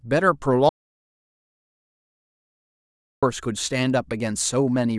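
Speech cuts off abruptly at 0.69 s and falls into silence with no room tone until 3.23 s, losing about 2.5 s of audio; this audio dropout to silence was likely caused by a lost input.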